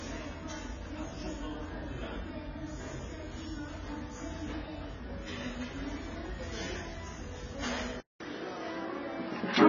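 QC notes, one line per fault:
throughout, AAC compression. Nothing is present above 7 kHz, so the audio sounds dull and closed in. The remaining band is coarse, with smeared detail and a fizzy, warbling texture on sustained sound. The likely cause is heavy AAC-LC coding at a very low rate, which fits about 16 kbps. At that rate the encoder drops the top band and quantises what remains against a hearing model, leaving swirling artefacts.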